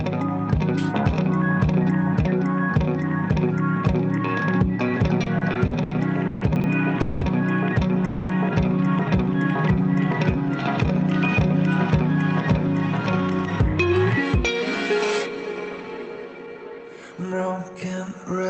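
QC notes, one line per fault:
5.23–7.24 s, repeated stalls (stutter): The sound catches and drags seven times in about two seconds. Each stall is a short hold where the last bit of audio is stretched out to fill the wait. The longest hold lasts 200 ms. The holds add about 0.54 s in all, roughly a quarter of that span. Nothing seems to drop out. Packets were arriving slower than playback, so the jitter buffer kept running dry and the receiver kept repeating what it had.
6.56–6.64 s, chunks out of order: Inside the stutter there is a brief jumbled blip. A 40 ms piece of audio plays one slot too late, after the piece that should follow it. No audio is missing, but the order is wrong. The pieces meet at hard joins out of sequence. This sits right inside the stall run.
8.05–8.32 s, call audio freeze: The sound stops moving forward for about a quarter of a second. A fading buzz or hiss fills the gap instead of silence. 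Afterwards the audio resumes exactly where it paused, so nothing is lost, only delayed. That pattern likely comes from packets held up in transit, which drained the jitter buffer. The receiver then bridged the wait by continuing the last sound until fresh audio arrived.
15.29–17.99 s, jitter buffer speed-up: The audio runs about 11 percent fast here while the pitch stays the same. It sounds hurried. Somewhere around a third of a second is trimmed out over this stretch. The jitter buffer had built up more delay than it wanted. The receiver cut many tiny pitch-length slices to catch up, and each slice is too short to hear alone.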